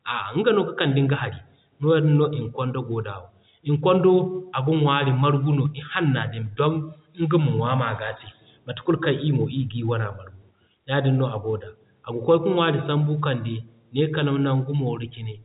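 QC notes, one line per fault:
No faults heard; telephone-band speech, nothing above 3.8 kHz.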